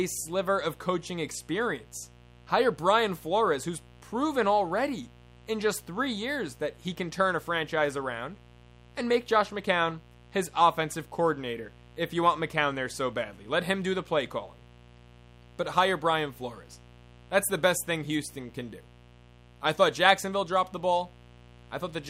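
Mains buzz runs throughout the speech: sharp switching spikes at twice the 60 Hz mains rate add a raspy buzz sitting roughly 25 dB below the voice.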